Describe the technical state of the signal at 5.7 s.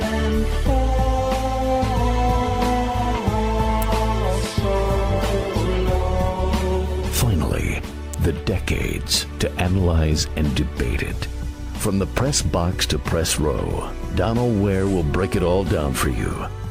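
At 5.7 s the signal sits inside a call bitrate drop lasting from 4.8 to 7.99 s. The encoder starves for bits, so the audio turns coarse, watery and muffled. On a spectrogram the upper band vanishes and detail smears, which fits a fall from about 96 to 17 kbps.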